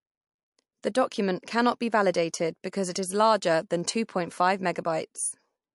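Throughout the speech the treble stops dead at 11.3 kHz, and what remains sounds watery and swirling, with chirpy s sounds. This is MP3 compression, likely at a low bitrate near 50 kbps, letting weak frequency lines flicker between frames. A plain low-pass filter would dull the top without that warble.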